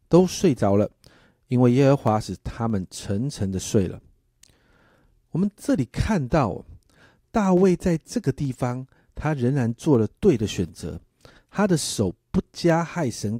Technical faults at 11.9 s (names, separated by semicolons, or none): periodic USB or driver dropouts